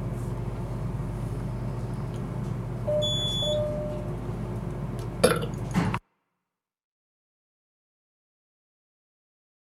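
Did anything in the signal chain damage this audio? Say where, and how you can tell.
Yes. At 3.42 s, compressed frames were skipped at the codec stage: about three 23.2 ms frames, roughly 70 ms, vanish. The audio jumps ahead by the length of the missing frames.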